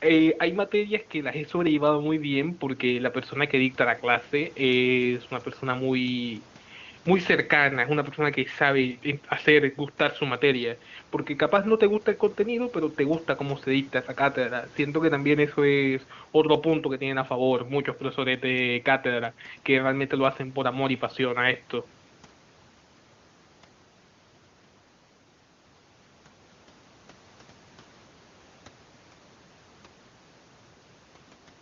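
Speech recording; no technical faults are audible.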